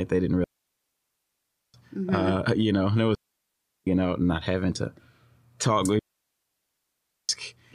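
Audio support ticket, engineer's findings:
Digital wireless dropout, three events: 0.44–1.74 s, 3.15–3.87 s, 5.99–7.29 s. Speech cuts to clean near-silence, 1.3 s, 0.72 s, 1.3 s. No noise burst either side. Receiver losing too much link data, muting with a very short fade.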